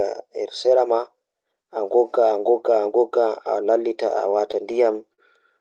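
From 4.09 to 4.84 s there are scattered short gaps: about four lost or late packets, each patched by stretching the last sound, so the speech picks up brief ticks and smears. At 5.14 s comes a short stall from a late packet. The jitter buffer ran dry and the receiver held the sound for 39 ms, which you hear as a slightly buzzy drag. Over all of this sits the call codec's band limit, with top end rolling off around 12 kHz.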